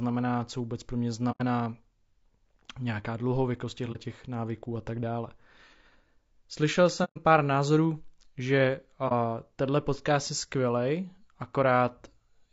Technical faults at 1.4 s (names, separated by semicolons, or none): low-delay AAC compression; AAC frame loss with muting